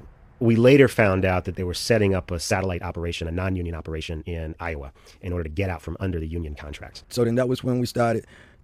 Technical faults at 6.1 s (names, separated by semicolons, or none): time-stretched section